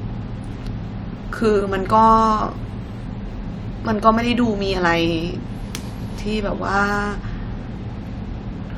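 No technical faults can be heard anywhere in the speech.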